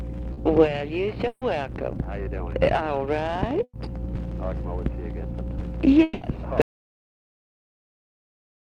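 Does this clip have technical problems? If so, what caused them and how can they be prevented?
Yes. At 0.33 to 0.39 s there is short concealed packet loss. About 40 ms never arrived, and the receiver filled it by extending the previous sound. It leaves a brief smear. A steadier connection or a larger jitter buffer prevents this.

There are two bursts of packet loss, at 1.27 to 1.43 s and 3.63 to 3.75 s. They cover about 140 ms and 100 ms of lost audio. In each, the receiver held the last sound and faded it, leaving a 50 ms gap of silence. Reducing network congestion and using forward error correction prevent this.

At 6.03 to 6.23 s, about 180 ms of audio is replaced by a held, fading continuation of the sound before it. No silence follows, and the audio resumes further on. This is likely a long network dropout. A wired connection or better link quality prevents this.

From 6.62 s to the end, the sound cuts off to total silence with no background noise. 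This is likely an audio dropout to silence, where the input was lost and silence was recorded. Checking cables, device connections and mute settings before recording prevents this.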